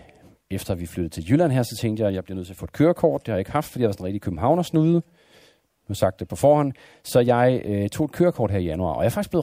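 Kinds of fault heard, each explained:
No faults can be heard.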